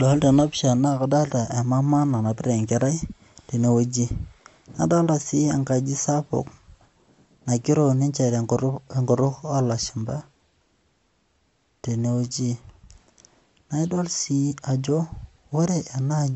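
MP3 compression throughout: nothing above 8 kHz, and weak detail swirls watery, likely an encoder short of bits, fitting about 50 kbps.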